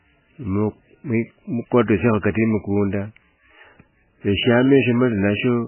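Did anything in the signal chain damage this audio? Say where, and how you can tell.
Yes, at the codec stage, throughout the speech: nothing above 3 kHz survives, and the remainder is heavily watery and swirling. This is likely MP3 compression at a very low bitrate, around 9 kbps, zeroing weak frequency lines per frame, unlike a plain band-limit filter, which leaves no swirl.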